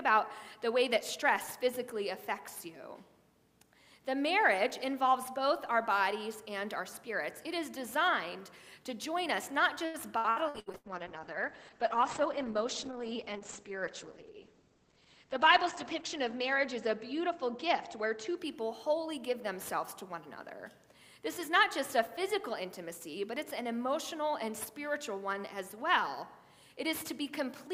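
Around 9.85 s the sound starts breaking up with repeated packet loss, giving that robotic, choppy quality. Through about 10.87 s there are six separate holes, the longest around 86 ms. Each one is patched by stretching out the last bit of audio, so roughly 37% of that second is concealment rather than real signal. You hear a choppy, stuttering texture with chunks missing, because the next gap lands before the previous patch has settled.

Just as that is ending, at 10.56 s, a call bitrate drop kicks in and runs until about 20.83 s. The top end collapses from a full 20 kHz down to about 8 kHz, which fits the encoder being pushed from something like 128 kbps down to around 9 kbps. At the bottom it sits there for about 5.5 s. Everything goes muffled and watery, with coarse, grainy detail, because the codec simply has too few bits to describe the sound properly.

Inside that low-bitrate stretch, from 14.33 to 15.25 s, there is a jitter buffer speed-up. 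The receiver had built up more delay than it wanted and trimmed short pitch-length slices, one after another, to catch up. In total it cut roughly a tenth of a second. Playback runs about 10% fast while the pitch stays put, so that stretch comes across as a bit hurried and rushed.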